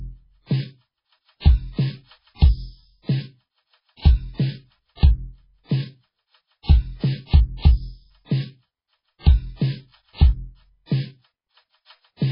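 Muffled, watery music from start to finish, with nothing above 5.3 kHz, likely from heavy MP3 compression at a starved bitrate, which fits roughly 16 kbps.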